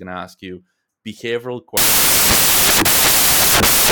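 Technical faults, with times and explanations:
1.77–3.92 s, samples built from the wrong bytes: byte order or alignment slips, so noisy low bits dominate each sample, giving loud, harsh broadband noise, close to white on loud sounds.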